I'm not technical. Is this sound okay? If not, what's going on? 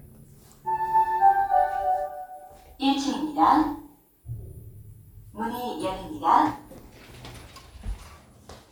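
Yes, it's fine: nothing goes wrong with this sound anywhere, so there's nothing to worry about.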